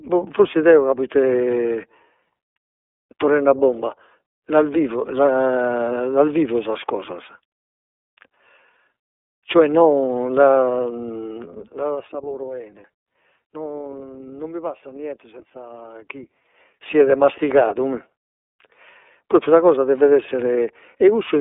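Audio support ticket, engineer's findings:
Whole clip: iLBC codec. Narrowband speech, nothing above 3.8 kHz, line band around 300 Hz to 3.6 kHz. Rough, synthetic texture fits iLBC's 30 ms frame, 13.33 kbps mode, each frame coded independently.

Zipper noise at 11.51–12.09 s and 15.9–17.05 s. Ticking under the level moves: a fall of about 15 dB, then a rise of about 15 dB. The gain changes in unsmoothed 2 dB steps, around 15 and 10 steps per second, and each step clicks.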